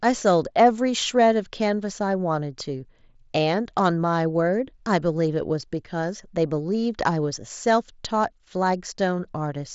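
No faults in this speech clip; it comes through the mSBC wideband headset link as expected, with content reaching about 7.7 kHz and nothing above.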